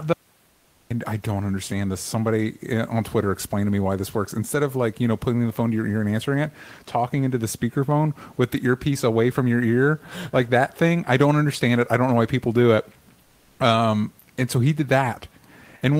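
A speech recording opens with an audio dropout to silence: from 0.13 s to 0.91 s the signal falls to silence with no room tone, and about 0.78 s of audio is lost, likely because the input link or device briefly failed while the recorder kept writing samples. From 13.23 s to 13.59 s, the genuine background, otherwise a room noise about 40 dB under the speech, is replaced by comfort noise for 360 ms. That stretch is a flat, featureless hiss about 4 dB quieter, likely from discontinuous transmission in an Opus-style codec synthesising noise during a detected pause.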